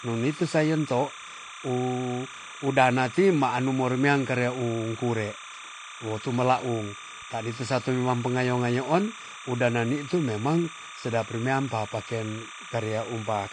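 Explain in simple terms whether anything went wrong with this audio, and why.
Timecode bleed: a timing signal from a nearby track or cable leaked into the recording. That signal flips rapidly between two pitches, around 1 and 2 kHz, so a steady chirping warble runs behind the speech from start to finish, well below the talking.

AAC compression is the likely cause of the second problem: the file was squeezed hard to save space. Everything above about 9.6 kHz is gone, so the speech sounds dull and muffled throughout, with a watery, fizzy texture on held sounds and hissy consonants.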